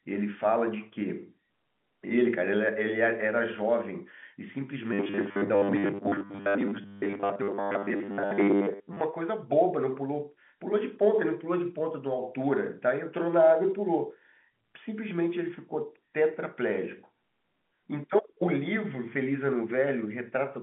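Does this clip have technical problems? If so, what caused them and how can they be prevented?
Yes. From 4.93 to 9.01 s the speech turns into a rigid, metallic buzz pitched at 100 Hz, the robotic sound from repeated short buffers. The likely cause is new audio arriving too slowly, so the playback side keeps looping a 10 ms chunk while most of the real signal in that stretch is skipped. The telephone band limit, nothing above 3.8 kHz, is separate. Preventing it means enough jitter buffering and reliable delivery that the receiver never runs dry.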